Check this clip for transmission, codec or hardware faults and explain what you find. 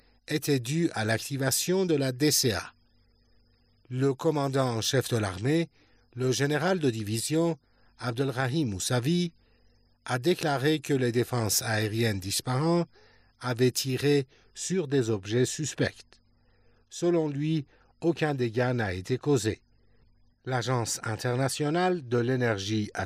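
One fault stands out: pre-emphasis left on, from 0 to 14.58 s. The treble boost of an FM-style 50 µs curve was never undone, lifting 10 kHz about 11 dB above 1 kHz. The sound is thin, bright and hissy-sibilant. Unlike a deliberate treble shelf, the lift climbs steadily from around 3 kHz upward.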